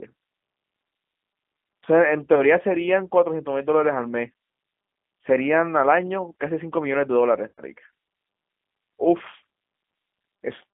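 The whole clip runs through a G.729 codec. The speech is squeezed into roughly 200 Hz to 3.4 kHz and rebuilt from a crude pulse model at 8 kbit/s, so it sounds plainly rough and synthetic. At 2.35 to 2.44 s, VoIP packet loss concealed by the speech codec fills a 20 ms gap, about one packet's worth, with a brief smear of buzzy tone or coloured noise. At 7.48 to 7.61 s it has to bridge 100 ms, which points to about five lost packets, so you hear a longer buzzy tone or coloured noise that fades out and stays distorted a moment after the audio returns.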